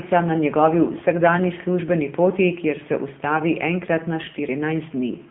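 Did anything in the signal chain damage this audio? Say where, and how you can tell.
Yes, at the codec stage: an AMR narrowband mobile codec runs through the whole clip. Nothing gets above 3.6 kHz, the lows thin out below 150 Hz, and the heavy buzzy, synthetic grain on the speech fits a low AMR-NB mode around 6.7 kbps.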